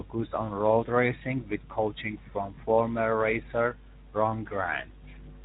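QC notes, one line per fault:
throughout, Speex codec: speech sounds hoarse, grainy and noisy. The CELP coder has too few bits to model the excitation, consistent with a low setting of about 11 kbps. On a spectrogram, harmonics look smeared and grainy, and any band above 8 kHz is a diffuse noise-like wash.
2.55–2.60 s, VoIP packet loss concealed by the speech codec: just after "racing with coaching from", the sound briefly turns into a stretched, fading smear as the decoder stretches its last pitch and filter, which fits a single lost 20 ms frame. The waveform shows a smooth, decaying stretch.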